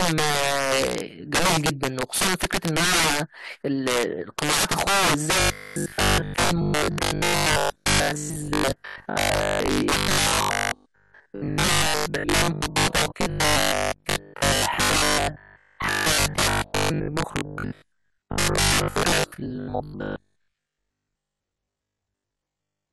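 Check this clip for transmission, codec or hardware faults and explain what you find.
Two faults are present in this speech recording.

Integer overflow runs throughout: the signal is pushed about 14 dB too hot, so a small share of peaks wrap to the opposite sign, giving violent cracks far harsher than clipping.

Robotic sound from repeated short buffers runs from 5.40 s to 22.92 s, likely from starved audio delivery where most of the signal is replaced by 20 ms repeats, forcing a metallic 50 Hz buzz.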